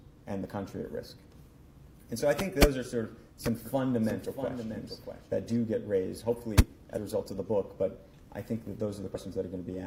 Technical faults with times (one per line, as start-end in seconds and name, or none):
3.66-5.56 doubled audio track
6.93-6.98 compressed frames skipped
9.11-9.16 compressed frames skipped